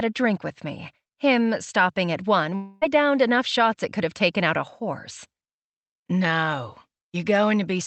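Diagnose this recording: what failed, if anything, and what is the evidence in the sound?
From 2.55 to 2.84 s the speech turns into a fading buzz or hiss and resumes with a piece missing, likely a long network dropout the receiver papered over.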